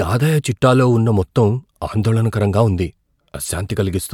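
A short speech recording with no technical fault to report. Nothing in it calls for a time or a cause.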